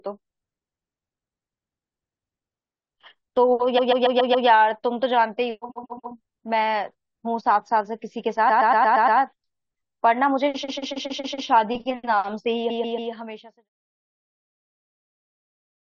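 Speech with repeated frames: at 3.77–4.47, 5.70–6.12, 8.49–9.18, 10.62–11.46 and 12.69–13.11 s, a block of about 139 ms (116 ms at 8.49 s) replays three to six times. The block lengths fit runs of five or six compressed frames. Unlike a dropout, nothing is lost: the same fraction of a second stutters, adding time. The last stutter sits inside the smooth fade-out, which runs from around 12.5 s to 13.7 s.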